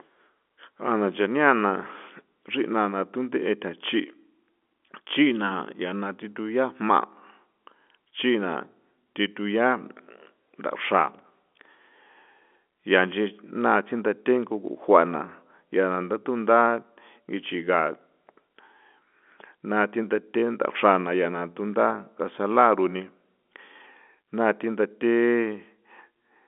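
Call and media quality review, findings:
No faults found in the speech; G.711 mu-law telephone path at 64 kbps, band-limited to about 250 Hz to 3.5 kHz, with nothing above 3.8 kHz as the format dictates.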